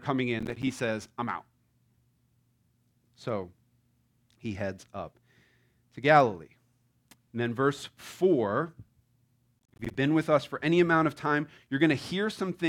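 A speech clip with two bursts of processor overload crackle. The first runs from 0.40 to 0.63 s, just before "says i'm out". The second runs from 9.59 to 9.95 s, before "been with us for". The processor kept missing deadlines for short buffers, around 10 ms each. Each miss left a hard-edged silent gap. The run of gaps is heard as gritty tearing.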